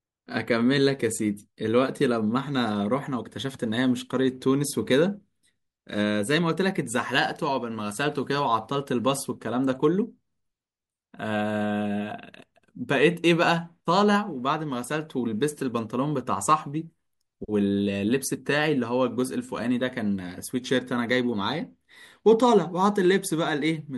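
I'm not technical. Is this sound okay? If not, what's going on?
Yes, nothing in this recording stood out as a problem when I listened to it.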